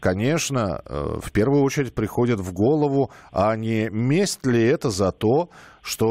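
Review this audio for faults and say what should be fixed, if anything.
Nothing here needs fixing, since no faults turn up anywhere in this speech recording.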